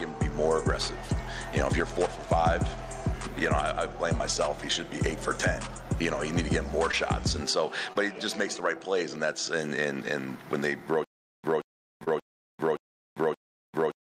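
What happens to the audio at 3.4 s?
Nothing goes wrong at 3.4 s; the audio plays through that moment intact, with no dropout, click, distortion or other fault to be heard.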